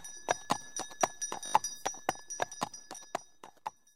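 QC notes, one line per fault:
1.46–1.54 s, repeated buffer: a short 20 ms slice of sound plays five times in a row, each repeat meeting the next at a hard join, so it comes across as a brief buzzy stutter. The next chunk of audio evidently arrived late, so the playback device replayed the last one it had, and roughly 70 ms of the original sound is skipped.
2.96–2.98 s, repeated buffer: a single extra play of a 20 ms slice, heard as one click-like hiccup with a hard join. The period fits a 20 ms buffer that was replayed once while the device waited for new data, and about 20 ms of sound is lost.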